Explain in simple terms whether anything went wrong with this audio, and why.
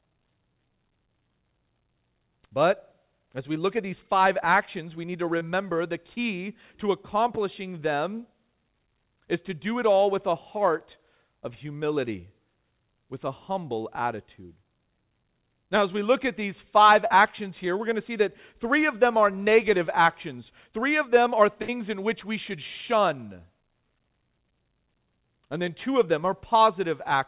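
Two kinds of fault show up in this call recording of speech. Both come from audio that didn't arrive in time.

There are two moments of short concealed packet loss. One is at 5.38 to 5.43 s, after "actions we need to". The other is at 17.07 to 17.12 s, after "look at these five". A few hundredths of a second went missing each time. The receiver patched each hole by stretching the sound just before it, so you hear a tiny smear or wobble.

There is one burst of packet loss at 21.62 to 21.70 s, between "of them are" and "in which we should". A longer stretch, about 60 ms, was lost. The last sound was held and faded to fill the gap. The speech then jumps ahead, with that bit missing.

The call itself uses the G.711 A-law codec, which leaves nothing above 4 kHz, so the sound is narrow like a phone line.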